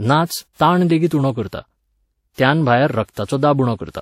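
Throughout the speech there is transcoding between lossy codecs, most likely a Vorbis encode at around 64 kbit/s followed by a WMA re-encode at a similar rate. The second codec spends bits on the first one's artefacts and adds its own, so both kinds of artefact sound together. On a spectrogram, energy stops sharply at 16.5 kHz, the lowest cut-off in the chain.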